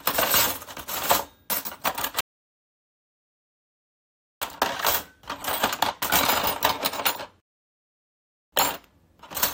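At 2.21 s the sound drops to dead silence and sits there until 4.42 s, then picks up exactly where it left off. That's a rebuffering stall: the player used up its downloaded audio and simply waited for more. Nothing goes missing, you just get about 2.2 s of extra gap. It happens again from 7.40 to 8.52 s, a shorter wait of roughly 1.1 s, with the same seamless pickup afterward.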